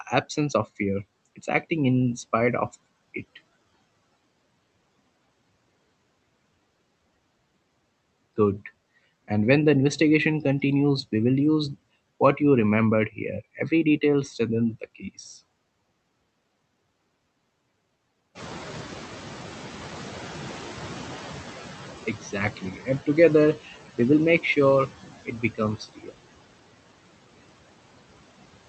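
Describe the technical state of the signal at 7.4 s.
At 7.4 s, the noise suppressor is at work, as it is for the whole clip. It estimates the steady background in each frequency band and pulls those bands down by about 20 dB, frame by frame, so the floor sinks in gaps between speech and comes back up under it. The leftover noise and the speech sit within the roughly 8 kHz band that the call codec carries.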